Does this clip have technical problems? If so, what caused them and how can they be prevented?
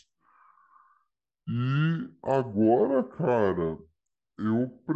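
Yes. The whole clip suffers from a wrong sample rate. The speech plays at about two-thirds speed and sounds roughly seven semitones low, which fits 48 kHz audio played at 32 kHz without conversion. Set the playback rate to match the recording, or resample correctly.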